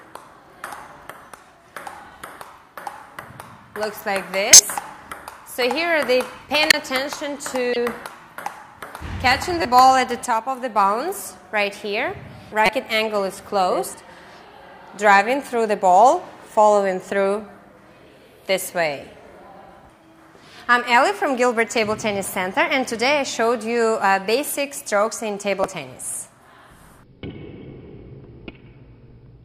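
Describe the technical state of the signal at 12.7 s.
A corrupt frame decoded at 12.66 to 12.72 s: damaged compressed data, about two frames, was played anyway, misplacing energy across frequencies as a brief chirp, blip or noise burst.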